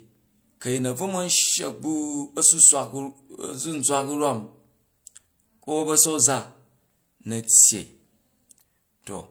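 Throughout the speech, the audio was likely encoded by one lossy codec and then re-encoded by another, a transcoding between lossy codecs consistent with MP3 at 96 kbit/s followed by HE-AAC at 48 kbit/s. Both codecs' artefacts sound layered together, with nothing above 20.3 kHz.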